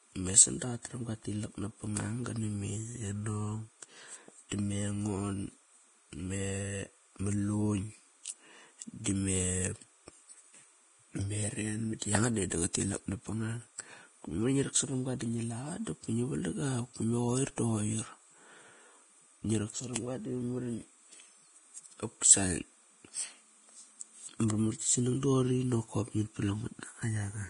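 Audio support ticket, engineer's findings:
Timecode bleed, whole clip: steady chirping warble behind the speech, switching between tones around 1 kHz and 2 kHz, roughly 40 dB down. Rhythm fits 30 frames/s linear timecode leaking from an adjacent track or cable. Unlike hum or a fixed whine, it alternates between two pitches an octave apart, which points to the code's square wave.

Vorbis compression, whole clip: heavy codec damage. Hissy, grainy treble, roughened tones, blurred onsets, nothing above 10.5 kHz. The likely cause is low-bitrate Vorbis encoding, consistent with a rate near 28 kbps. A plain low-pass would only dull the sound. Here the coarsely quantised upper band turns fine detail into noise.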